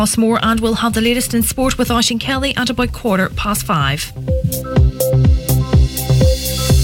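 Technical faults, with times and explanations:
No technical faults are audible.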